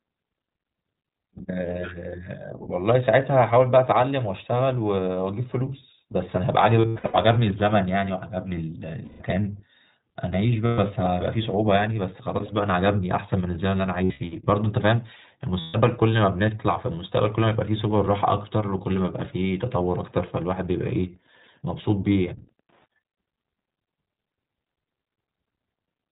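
Throughout, the speech sounds band-limited and slightly rough and synthetic, with nothing above 4 kHz. This is the iLBC codec, which codes each frame independently, and the damage is plainly audible. It fits the 15.2 kbps mode with 20 ms frames.

Lost iLBC frames cause held, buzzy vowel-like patches at 1.38 s (20 ms), 6.82 to 7.15 s (scattered), 9.04 to 9.22 s, 10.66 to 10.79 s, 14.04 to 14.22 s (scattered) and 15.60 to 15.76 s. In each patch the decoder repeats the last pitch cycle with added noise, and the speech recovers almost immediately afterwards.

From 19.64 to 22.90 s there is faint, steady ticking about ten times a second, roughly 40 dB below the speech. This is Wi-Fi interference: a nearby radio's beacon, every 102.4 ms, is being rectified by the audio circuitry.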